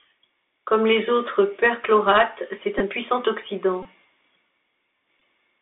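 From start to finish the speech runs through a Bluetooth CVSD headset codec, with the line limited to roughly 250 Hz to 3.6 kHz. The one-bit delta coder, consistent with a 64 kbps stream, cannot keep pace with loud, bright sounds, so sibilants turn scratchy and a grainy hiss sits underneath the voice.

Bluetooth headset packet repeats occur at 2.79 to 2.82 s, 3.83 to 3.86 s and 5.20 s. Lost voice packets were replaced by replaying the previous one, giving short buzzy stutters near 267 Hz; the gaps of 15 ms and 22.5 ms fit runs of about four and six packets.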